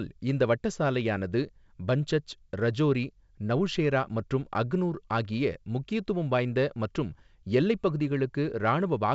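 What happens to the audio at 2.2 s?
Nothing goes wrong at 2.2 s; the speech there comes through intact, carried by G.722 wideband telephone coding at 64 kbit/s.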